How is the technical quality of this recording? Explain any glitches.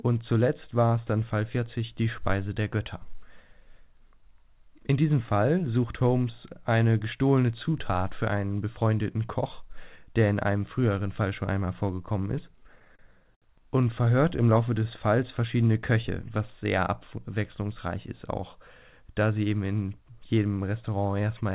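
The recording is band-limited, with nothing above 4 kHz, which fits a G.711 A-law call path, and it has one stretch of stutter.

Repeated stalls (stutter), 12.6 to 13.44 s, between "schon einmal vorgekommen ist" and "und verhört im": late packets drained the jitter buffer seven times, and the receiver stretched the last sound to cover about 146 ms, with the longest gap 68 ms. Nothing is lost, but the speech drags and judders. On a spectrogram this appears as smeared, repeated frames and broken rhythm in the waveform.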